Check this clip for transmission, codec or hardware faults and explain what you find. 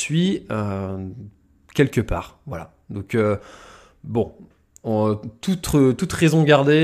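Nothing to flag here; the speech comes through without any fault that a careful listener would pick up on.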